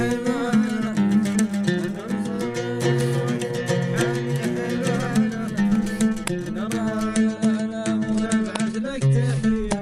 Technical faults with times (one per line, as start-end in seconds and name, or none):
7.07-9.82 adaptive stream at a lower bitrate